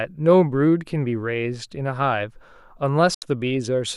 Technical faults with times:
3.14-3.23 digital broadcast dropout

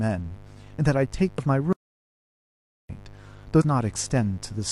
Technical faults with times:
0.00-4.72 mains buzz
1.37 compressed frames skipped
1.73-2.89 audio dropout to silence
3.60-3.62 compressed frames skipped

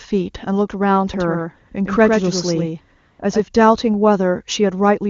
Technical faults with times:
1.14-3.40 doubled audio track
2.99-3.19 AMR comfort noise

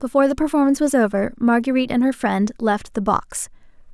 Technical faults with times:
none

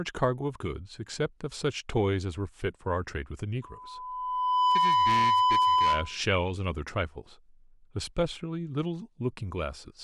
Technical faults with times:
3.62-6.20 loudspeaker feedback squeal

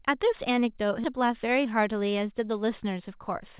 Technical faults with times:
1.04-1.06 skip ahead
1.13-1.95 jitter buffer speed-up

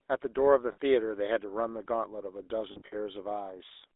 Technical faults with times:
0.00-3.96 GSM full-rate codec
0.72-0.78 lost GSM frames
2.72-2.95 lost GSM frames

